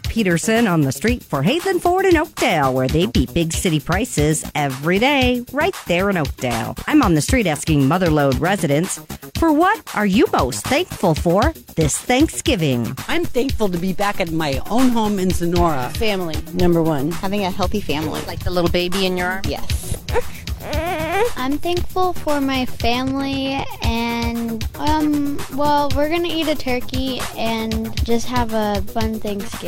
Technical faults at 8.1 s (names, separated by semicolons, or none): none